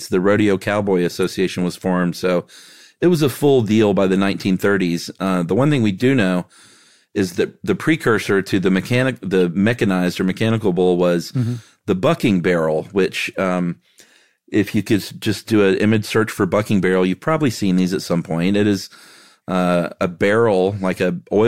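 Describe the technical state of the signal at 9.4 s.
At 9.4 s there's a burst of damaged data in the compressed stream, running from about 9.39 to 9.42 s, right after "precursor to the mechanic" and just before "mechanized or mechanical bull". Some bytes in the encoded stream got mangled, so the decoder misreads those frames, loses sync and hunts for the next valid frame header before it can carry on. You hear it as a quick glitch, roughly 26 ms long, cutting into the speech.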